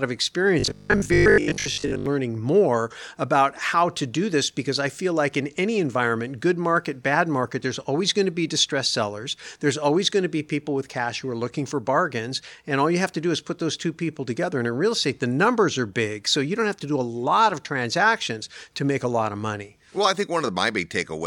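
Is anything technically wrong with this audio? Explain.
Yes. From 0.60 to 2.06 s, just before "learning more about how", there is robotic sound from repeated short buffers: a rigid 50 Hz metallic buzz. The likely cause is a 20 ms chunk replaying for most of that span while fresh audio is skipped.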